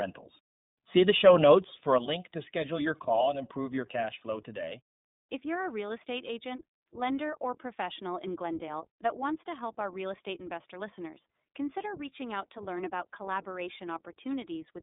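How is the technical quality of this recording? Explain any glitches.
The recording is plainly degraded by narrowband codec processing and a level drop that lasts most of the clip.

From start to finish, the speech carries iLBC codec damage. The audible band sits at roughly 150 Hz to 3.7 kHz, with nothing above 3.8 kHz. Each 20 ms frame is coded on its own, giving a rough, synthetic grain. A simple low-pass filter would dull the sound without this roughness. The character fits iLBC's 15.2 kbps mode.

At 1.98 s, a sudden gain jump cuts the level by about 7 dB in a single step, and it stays down until the end. Speech and background noise fall together. Unlike a fade or compressor action, there is no ramp and no recovery, which points to a gain setting likely applied without smoothing.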